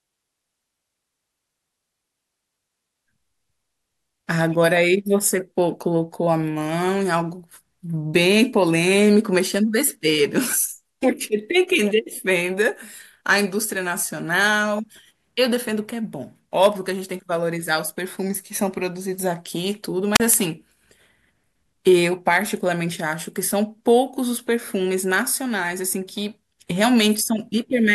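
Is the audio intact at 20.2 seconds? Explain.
No. At 20.2 seconds the speech is just coming back from a wireless microphone squelch dropout that runs from 20.14 to 20.20 s. The radio link from the analogue FM transmitter faded far enough that the receiver's squelch closed and muted its output. This is heard as a short burst of rising hiss, then a gap of near silence lasting about 37 ms, after which the speech resumes at this point.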